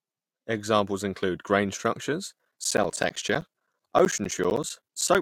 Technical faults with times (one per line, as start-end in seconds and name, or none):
2.32-5.15 periodic USB or driver dropouts